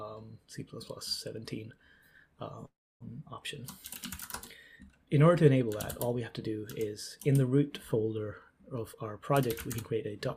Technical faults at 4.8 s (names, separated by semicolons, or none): none